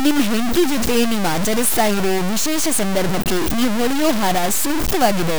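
Low bit depth without dither runs throughout the speech: heavy grainy distortion that shifts with the signal, the error nearly as loud as the speech itself. The likely cause is truncation to very few levels without dither, which fits about 3-bit resolution.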